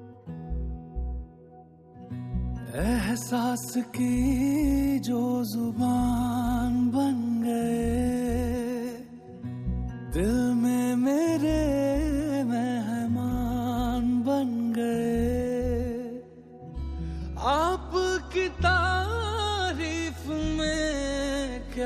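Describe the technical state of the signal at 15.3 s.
At 15.3 s the signal is intact, with no dropout, distortion, glitch or other technical fault audible at that moment.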